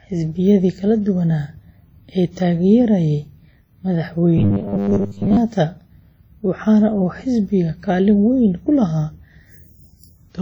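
Speech carrying heavy WMA compression throughout, likely from a low bitrate near 32 kbps, heard as washy, ringing hiss; a spectrogram shows smeared, blurred harmonics and patchy gaps. From 4.38 to 5.37 s, robotic sound from repeated short buffers gives a rigid 100 Hz buzz, likely from 10 ms chunks looping over most of the span; the waveform shows identical repeating cycles.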